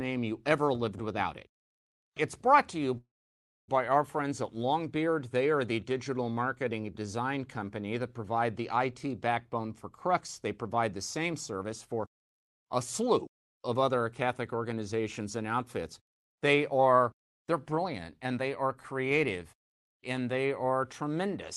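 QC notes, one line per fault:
2.97–3.70 s, call audio freeze: the sound smears into a short fading buzz, then falls silent for about 0.62 s and resumes exactly where it stopped, with nothing lost. The likely cause is delayed packets emptying the jitter buffer, which added about 0.7 s of delay.
11.19–15.21 s and 16.71–19.21 s, jitter buffer speed-up: the speech runs about 6% fast at unchanged pitch and sounds slightly hurried. The receiver clipped out tiny pitch-period slices to shed surplus buffered audio, roughly 0.3 s in the first stretch and 0.15 s in the second.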